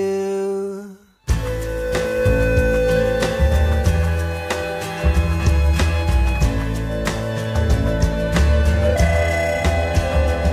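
Nothing in this audio stands out as a technical fault; it just runs along without any glitch, dropout or other trouble worth pointing to.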